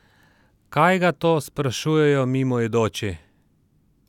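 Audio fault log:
No faults heard anywhere in the speech.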